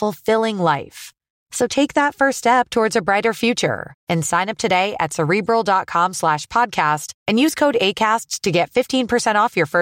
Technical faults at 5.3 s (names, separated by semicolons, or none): none